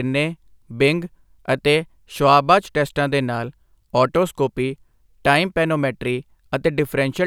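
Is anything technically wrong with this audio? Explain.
No, nothing technically wrong can be heard here.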